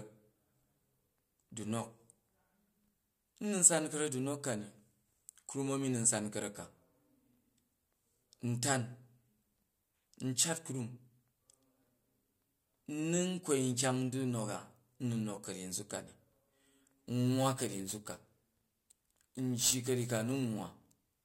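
Crude rate conversion from 17.0 s to the end of this speech clip adds a gritty, inharmonic fizz around 15 dB below the speech, as samples are repeated without filtering, consistent with a 32 kHz to 44.1 kHz conversion.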